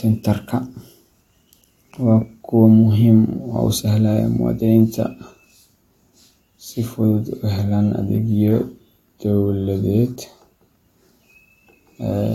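No technical faults can be heard at any point in the speech.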